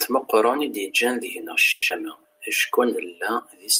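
From 1.71 to 1.92 s the speech becomes a fading buzz for 190 ms, then resumes missing 80 ms, likely a long network dropout.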